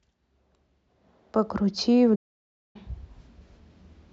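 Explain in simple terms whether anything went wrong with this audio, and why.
The player most likely ran short of incoming audio data, or the part of the software feeding the sound out was held up, which is a playback stall. You can hear it as a sudden gap in the speech: at 2.15 seconds the sound cuts out completely and stays silent for about 0.59 seconds, until 2.76 seconds. Then the speech carries on again, as if someone briefly pressed pause in mid-speech.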